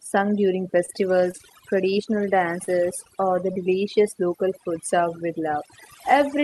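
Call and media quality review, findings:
Overdone noise removal, whole clip. Background dropped and broken up with twinkly specks. Probable component: noise suppressor set too aggressive; it's zeroing bands near its noise estimate and taking the quiet parts of the speech with them. The top end stops around 12 kHz, which fits a super-wideband call codec like Opus at about 32 kbps. No complaints there.

Short stall from a late packet, 0.85–1.03 s and 1.37–1.41 s. Sound held too long with a faint buzzy drag, nothing lost. Probable component: jitter buffer ran dry waiting on a late packet. First stall stretched the last sound 29 ms and then clawed back about 10 ms. Second stretched 20 ms.

Short concealed packet loss at 1.31–1.35 s, 2.63–2.69 s (right before "or the") and 3.53–3.57 s (right after "or the"). Brief smear or wobble, and short consonants can drop out. Probable component: decoder loss concealment. 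It papered over about 20 ms, about 40 ms and about 20 ms of missing audio by extending the previous sound, then blended back in.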